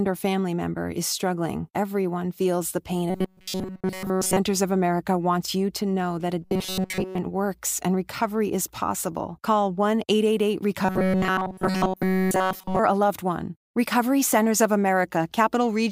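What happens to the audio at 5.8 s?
Nothing goes wrong at 5.8 s: the speech carries on intact through that moment, with no break, click, dropout or other fault to be heard.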